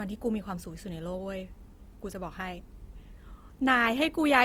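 A speech clip with plainly audible Opus compression throughout, its voice turned rough, grainy and noisy rather than swirly, likely from a low-bitrate music-mode encode near 24 kbps. A spectrogram shows few holes, with upper bands filled by speckled noise-like texture extending to about 20.1 kHz.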